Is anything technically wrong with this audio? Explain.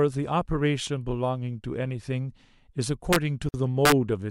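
Yes. This speech clip has two kinds of fault, both near its end.

At 3.13 to 3.16 s and again at 3.85 to 3.92 s there are violent, harsh cracks on the loudest moments, far sharper than ordinary clipping. This is integer overflow. The signal was driven about 2 dB past the largest value the integer format can hold, and instead of being limited, those peaks wrapped around to the opposite sign. Each overshooting peak flips across the full range, producing the crack.

From 3.49 to 3.54 s the sound abruptly drops out for 51 ms and then resumes exactly where it left off. The edges are smeared rather than perfectly clean. This is a gap at a join of encoded pieces. The audio was encoded in separate sections and joined without trimming, so the encoder's start-up delay and the padding of the previous piece's last frame remain as a short silence.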